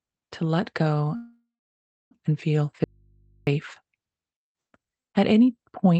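At 1.15 s, after "to let go", there's a call audio freeze, likely from delayed packets draining the jitter buffer. The last sound buzzes on, fades, then goes silent. Speech resumes at 2.14 s with "and feel", nothing lost, just pushed later. From 2.84 to 3.47 s there's an audio dropout to a faint residue. The voice cuts off abruptly, leaving only hum about 35 dB down, likely a lost signal on a still-live input.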